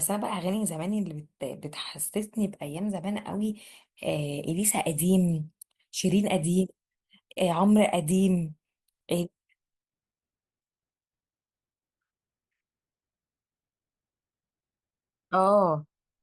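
No technical faults can be heard anywhere in the speech.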